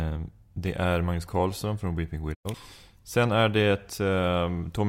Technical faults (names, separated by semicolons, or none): digital broadcast dropout